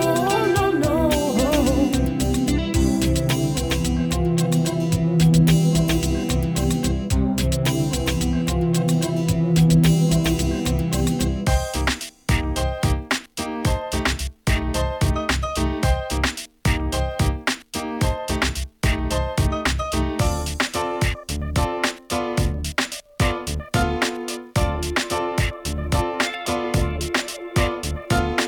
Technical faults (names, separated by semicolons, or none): none